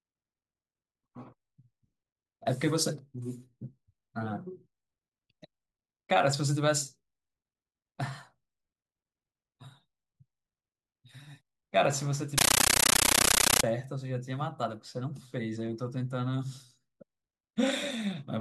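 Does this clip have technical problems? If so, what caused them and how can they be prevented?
Yes. From 12.38 to 13.64 s the speech gives way to loud, chattering static. That's a compressed stream played as audio. A Dolby Digital bitstream got passed along as if it were ordinary PCM samples, so nothing decoded it. Each frame comes out as a 13.3 ms burst of noise followed by silent padding, repeating at 31.25 Hz, which fits a 640 kbps AC-3 stream. To prevent it, make sure the receiving device is set to decode Dolby Digital, or switch the source output to PCM.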